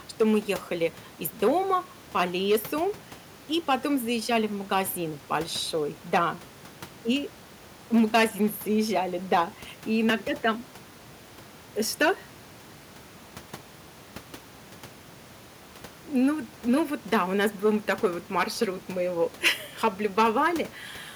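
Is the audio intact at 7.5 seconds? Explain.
Yes, the audio is intact at 7.5 seconds, with only the room's own background noise sitting about 24 dB below the speech.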